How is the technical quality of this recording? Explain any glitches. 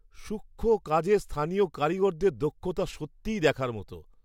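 No glitches to report; the speech recording has no audible technical faults.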